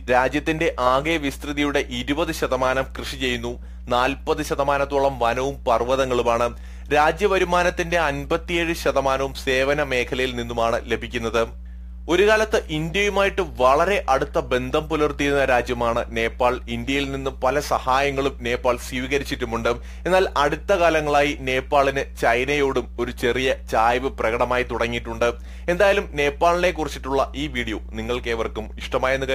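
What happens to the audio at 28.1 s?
At 28.1 s, as everywhere in the clip, a mains hum sits under the sound: a steady 60 Hz tone with a few low harmonics, roughly 15 dB below the wanted signal, so it is plainly audible. It comes from power-line current leaking into the signal through a ground loop or a nearby transformer. On a spectrogram it shows as an unbroken horizontal line at 60 Hz, with fainter ones at multiples above it, and the waveform rides on a regular low-frequency ripple.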